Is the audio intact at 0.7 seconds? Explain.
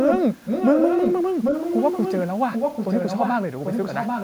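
No. From 0.45 to 1.22 s an echo leak returns a delayed copy of the speech, about 0.79 s late and somewhat quieter, likely from a loudspeaker echo canceller's residue.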